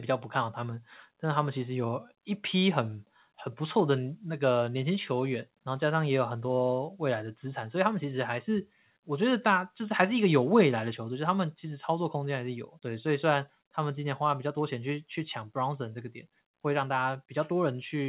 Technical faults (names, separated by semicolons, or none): microphone volume stepped down